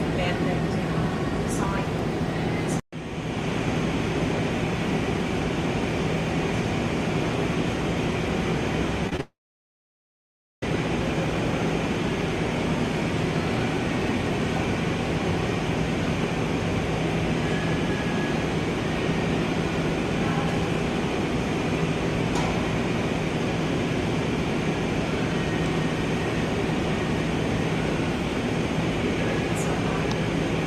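At 9.09 s and again at 9.17 s there are two short stalls from a late packet. Each lasts about 20 ms. A packet arrived late, so the receiver held the last sound for that time. The sound then carries on from the same place, and nothing is lost.

A call audio freeze follows from 9.21 s to 10.63 s. The sound stops for about 1.4 s, and roughly 1.3 s of that is silence. The likely cause is packets held up in transit, which emptied the jitter buffer. When the audio returns it resumes where it stopped, so the break adds a gap without dropping any sound.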